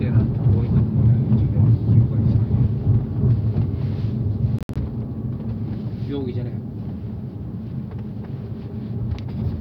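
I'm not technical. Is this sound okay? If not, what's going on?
No. Around 4.59 to 4.77 s there is a Bluetooth dropout, most likely from the wireless link to the headphones briefly failing to deliver pieces of audio on time, so those pieces were thrown away. You hear the sound cut out in short, abrupt gaps, about a tenth of a second missing in total, the longest single gap about 64 ms. Afterwards it picks up further along, as though it had kept playing during the silence.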